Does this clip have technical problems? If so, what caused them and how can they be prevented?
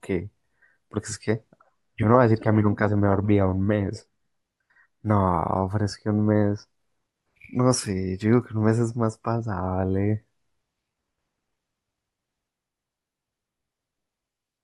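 No, no technical faults here.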